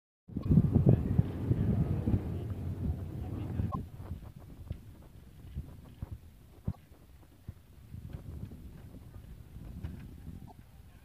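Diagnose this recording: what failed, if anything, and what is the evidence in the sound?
Damaged data in a compressed stream broke the codec stage. The decoder lost frame sync and had to resync, leaving short blips at 0.41–0.46, 3.67–3.76, 6.68–6.76 and 10.44–10.52 s.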